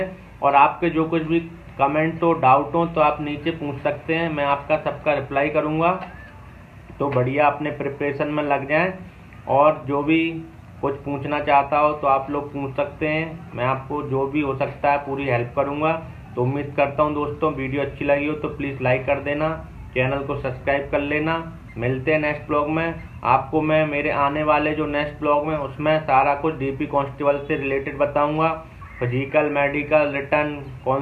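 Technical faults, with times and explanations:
No technical faults can be heard, so there are no times or explanations to give.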